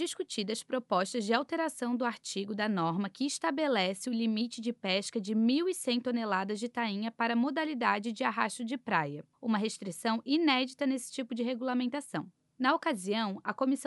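Nothing goes wrong anywhere in this audio; there's no glitch, dropout or other technical fault to point to at any moment.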